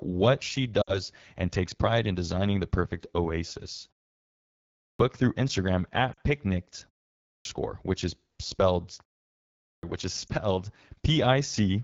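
Speech coded with the AMR wideband (HD Voice) codec at 8.85 kbit/s, one of its two lowest rates. The codec damage is plainly audible throughout: the pulse-excited vocal tract model cannot track the voice closely at this rate, so the speech sounds rough and raspy, and the band above 6.4 kHz is filled with shaped noise rather than real detail. Lost AMR speech frames occur at 0.81 to 1.02 s, 6.13 to 6.19 s and 10.27 to 10.33 s. The decoder reuses the last good pitch and vocal tract settings with falling gain, so the 60 ms gap at 0.8 s drops to near silence within two frames before recovering roughly, which fits a run of about three frames. The 40 ms gap at 6.1 s drops to near silence, and the 20 ms gap at 10.3 s, a single frame, is only a brief dip. There is a clipped start after a pause at 4.69 s (after a 0.85 s pause), 7.19 s (0.37 s pause) and 9.53 s (0.56 s pause). In each case about 0.26 to 0.30 s of onset is swallowed while the output device wakes or relocks, so the speech begins abruptly without its first sounds.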